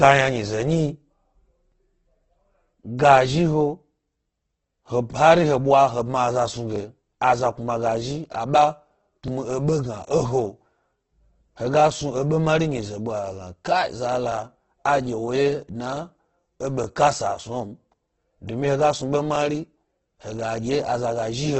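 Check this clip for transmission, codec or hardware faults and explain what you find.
Two faults are present: heavy codec damage across the whole speech clip, and repeated stutters at chunk joins.

Opus compression, throughout: the speech sounds rough and grainy, with tonal parts turned noisy and nothing above 8.2 kHz. The likely cause is Opus in its music (CELT) mode at a very low rate, around 12 kbps. At that rate the encoder can't code every band properly, so it keeps each band's energy but fills it with folded or noise-like content. That trades clean detail for this gritty texture, and the narrowed band removes the top end.

Overlapping chunks, at 1.72–1.74, 6.76–6.78 (just after "bma aza"), 11.80–11.82, 14.32–14.34, 16.84–16.86 and 19.36–19.38 s: each is a brief click-like stutter. The audio appears to have been handled in chunks of about 2.5 s, and each new chunk begins 20 ms before the previous one finished. 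At every join that 20 ms slice plays twice, so the stutters recur at intervals of about 2.5 s or twice that.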